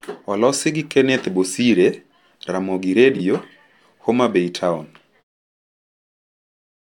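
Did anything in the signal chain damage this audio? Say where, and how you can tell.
Yes, in the network. Frames out of order at 3.14 to 3.2 s. Two 23.2 ms blocks swapped places, causing a brief garbled flutter.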